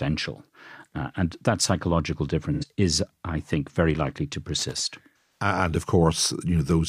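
At 2.53 to 2.66 s, between "and that psychological" and "is I think very", a brief smeared, noisy or phasey patch marks AAC frame loss with concealment: about 85 ms of data went missing, consistent with two lost frames, and the decoder rebuilt it from the last good spectrum. An irregular burst of crackle from 4.59 to 4.83 s, right after "think very likely to", is loose connector crackle, where a worn or dirty contact rapidly makes and breaks, chopping the signal. At 5.41 to 5.45 s a second concealed patch points to roughly four lost frames, about 170 ms of missing audio filled in by the decoder.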